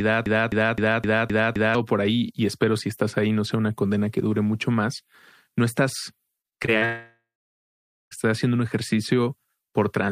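Speech opens already caught in a broken-record loop. From 0.0 to 1.75 s, one piece about 0.26 s long plays six times, back to back and identical. The player or stream likely stalled and kept resending the last fragment it held. The speech meant for that stretch is gone. Normal speech resumes at "por ahí y espero". At 6.41 s, right after "mucho más no estás", repeated packet loss sets in and lasts until 6.83 s. There are five short holes, the longest about 37 ms. Each hole is patched by stretching the preceding sound. About a quarter of this span is patched audio. The sound turns choppy, with small pieces missing. A long network dropout follows at 6.85 s and runs to 8.13 s. About 1.26 s of speech never plays. First, the last sound is carried on as a fading buzz. Then about 0.86 s of silence remains. The likely cause is that no packets arrived for that whole stretch. Speech returns at "estás haciendo un", with the missing part simply skipped.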